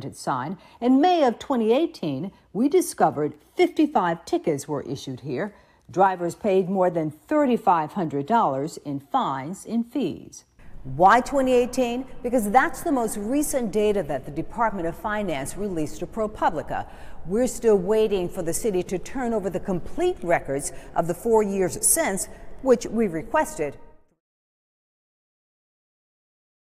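Nothing is technically wrong with the audio, and the fade-out that finishes at about 24.2 s is smooth, as an editor would shape it.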